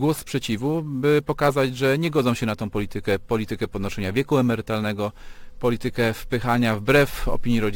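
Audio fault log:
Throughout: sample clock jitter. The converter's timing wanders, so each sample lands a little early or late at random. The timing spread is on the order of ten microseconds. That error turns into noise whose size depends on how steeply the waveform is changing. The result is a gritty hiss riding on the sound, roughly 25 dB below it. It grows on loud and bright passages and disappears whenever the audio goes quiet.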